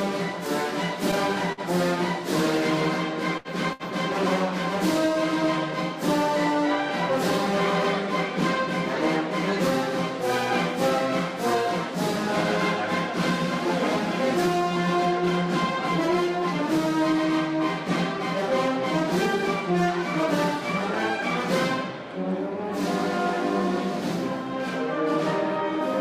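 A short stall from a late packet occurs at 1.52 to 1.60 s, 3.37 to 3.48 s and 3.73 to 3.83 s. Each time a packet arrived late and the jitter buffer emptied, so the receiver held the last sound for 51, 73 and 68 ms until it came. Nothing is lost, but each sound lingers unnaturally with a faint buzz or dip.

A jitter buffer speed-up runs from 13.97 to 16.92 s. Having built up excess delay, the receiver trimmed tiny pitch-period slices over and over, dropping roughly a tenth of a second in total. The audio plays about 3 percent fast at unchanged pitch.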